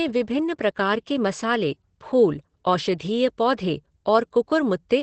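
Speech throughout carries Opus voice compression: nothing above 8.5 kHz, plus a hoarse, slightly robotic grain that a plain low-pass filter wouldn't add, which fits about 12 kbps SILK.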